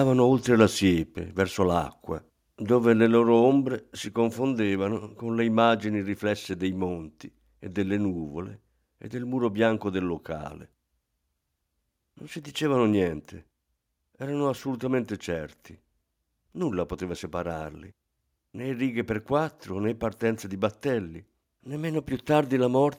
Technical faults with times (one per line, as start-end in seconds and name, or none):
0.60-0.62 microphone overload
1.02 microphone volume stepped down
4.08 microphone volume stepped down